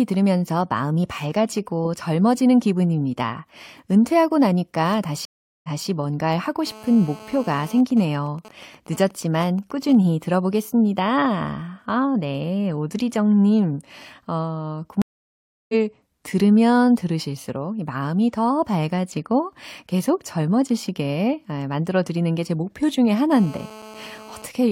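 A speech recording is interrupted twice by a stream reconnect. At 5.25 s the connection drops, the player sits silent for 385 ms, then restarts a fresh decoder on a burst the server resends, so the audio picks up again 232 ms earlier than where it broke off and a short stretch is heard twice before normal flow returns at 5.87 s. The second break comes after "네 오드리정님 어" at 15.02 s: 672 ms of silence, and this time the stream rejoins roughly 0.7 s further on, so that much of the speech is simply skipped and the talk fades back in at "들으면 들으실수록 마음이 더" by 15.75 s. Separately, a nearby 2G handset in a call is producing GSM phone buzz. Its radio transmits in bursts 217 times a second, and the audio circuitry rectifies those pulses into a hard, raspy 217 Hz buzz full of harmonics, sitting about 20 dB below the speech and bearing no relation to it. It runs steadily from 6.67 to 7.81 s, right after "뭔가를 하고", and again from 23.31 to 24.46 s, after "게 제 목표 중에". 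Between those, from 7.91 to 9.95 s, the same phone is in the call while its user is silent, so it transmits only sparse groups of bursts. These GSM signalling bursts come through as even ticks with a longer 217 Hz buzz twice a second at around 20 dB below the speech.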